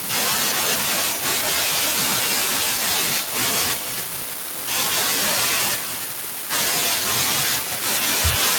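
Echo leak at 1.02–1.24, 2.74–2.79, 3.2–3.35, 3.74–4.08, 5.75–6.09, 6.84–7.06 and 7.57–7.84 s. A fainter copy of the speech returns about 0.3 s late, roughly 10 dB down. A loudspeaker echo canceller likely let it through.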